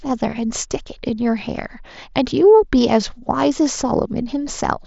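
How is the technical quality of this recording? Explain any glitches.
Nothing stood out as a glitch on listening to this speech recording, which comes through a wideband Bluetooth headset link with its content ending at about 7.7 kHz.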